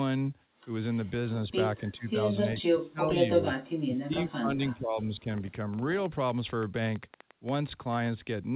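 The speech dips from 1.77 to 2.14 s by about 15 dB, then drops more sharply from 2.64 to 3.18 s, by about 30 dB. From 3.69 to 5.53 s it sinks again, by about 20 dB, for well over a second in total. This is speech suppressed in double talk. The likely cause is an echo canceller that couldn't tell the near talker from loudspeaker echo while the far side was also speaking, so it turned both down.

From 3.48 to 8.07 s a train of clicks ticks over the audio, overlapping the last dip. There are around thirty clicks at an uneven pace averaging about 6.5 per second, peaking roughly 5 dB above the speech, and they are audible in pauses too. Their similar shape points to a likely cause in interference from nearby equipment or a faulty connection or power supply injecting repeated pulses. Throughout, the G.711 call path limits everything to below 4 kHz.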